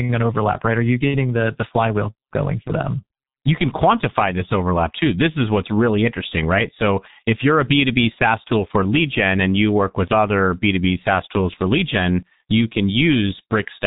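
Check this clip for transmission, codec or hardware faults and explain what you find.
The speech carries heavy G.723.1 codec damage from start to finish. This low-rate telephony coder works on 30 ms frames and rebuilds the voice from a slowly updated model, which fits a rate near 6 kbit/s. The result is muffled, hoarse speech with smeared consonants. A spectrogram shows a hard ceiling at 3.8 kHz with empty space above, and a blocky, frame-stepped texture.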